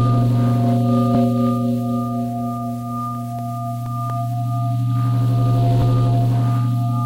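A scratch or blemish on the disc has wiped out more data than error correction could rebuild once per revolution, so the player patched those samples. In this everyday-sound recording that leaves CD scratch ticks: seven brief clicks, the longest a couple of milliseconds, repeating about five times a second from 2.91 to 4.34 s.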